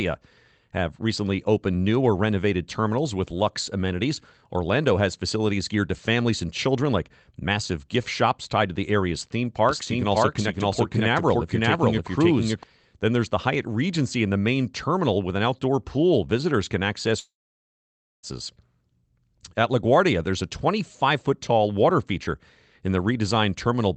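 Speech that has come through a call codec, with content stopping near 8 kHz on a spectrogram as a wideband Opus setting would, carries a doubled audio track from 9.69 to 12.63 s, right after "to the area's theme": a second full-band copy runs about half a second behind at roughly the same level, with no decay or room colour. It is likely caused by a slower second capture path or an edit holding two copies out of step. On a spectrogram, each syllable's pattern repeats about half a second later at matching brightness. On the waveform, the envelope smears into overlapping bursts that begin and end abruptly at those times. From 17.19 to 18.25 s comes a long network dropout in which about 1.04 s of audio never arrived. The receiver extended the last sound as a fading buzz or hiss that gives way to near-silence for roughly 0.93 s, and speech resumes with the lost part gone. The likely cause is a stall in packet delivery. 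The waveform shows a brief decaying tail and then an almost flat line, and the spectrogram shows a short smeared, fading band followed by a blank gap.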